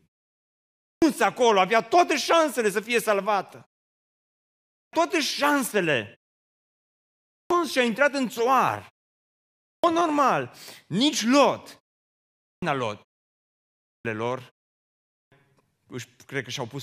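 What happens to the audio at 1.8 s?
Nothing goes wrong at 1.8 s; the speech is intact there.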